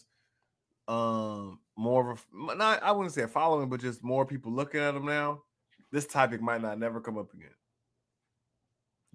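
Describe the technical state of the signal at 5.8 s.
At 5.8 s the speech signal is intact, with no audible technical fault at that moment.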